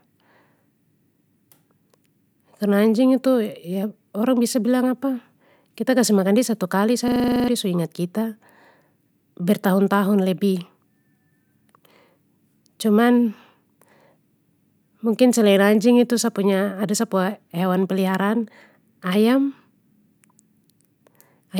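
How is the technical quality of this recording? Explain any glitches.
There's one clear glitch worth flagging: a system hang loop from 7.08 to 7.48 s, just after "satu kali". The system froze while the sound hardware kept cycling one 40 ms slice of audio, ten times in a row. That gives a low, rattly buzz at 25 Hz, and roughly 0.4 s of real audio is lost before "su ingat kita" comes back in.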